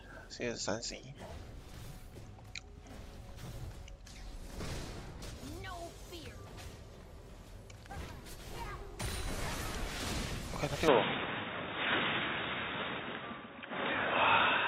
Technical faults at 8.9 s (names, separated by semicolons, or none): none